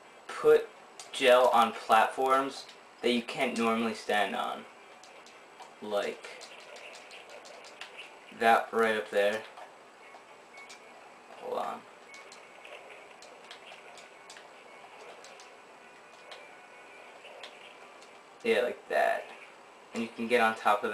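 A filter restarted on every block runs from 0.0 to 12.94 s: the filter drops its state at each block boundary and starts from silence, leaving a small transient every time. The result is a 23.4 Hz buzz that tracks the audio's level, which fits a 2048-sample block.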